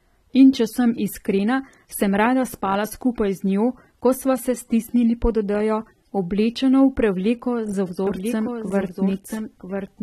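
From the first second to the last, the speech carries AAC compression damage that is plainly audible. Nothing is present above 13.8 kHz, so the top end sounds dull, and sibilants and sustained vowels take on a smeared, warbling, slightly fizzy texture. This is likely AAC-LC at a low bitrate: the encoder lowers its bandwidth and coarsely quantises what remains, leaving spectral gaps. The degree of damage fits a rate around 32 kbps.

At 8.07 s a doubled audio track appears abruptly and runs to the end of the clip. A second full-band copy of the speech trails the original by about a second, somewhat quieter, with no reverberant decay or room colouring, so it sounds like a clean echo overlapping the live signal. The likely cause is the same audio being mixed in twice, either from a slower capture path or from two misaligned copies left in an edit.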